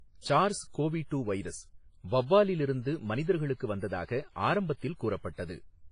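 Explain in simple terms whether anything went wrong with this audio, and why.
Something did go wrong, and it lasts the whole recording. The speech has a ringing, washy quality, with a hiss that swells and fades along with the voice. Nothing can be heard above about 10.4 kHz, so the top end sounds dull. The likely cause is heavy WMA compression. That kind of encoder saves space by discarding quieter detail and smearing its errors over short stretches of time.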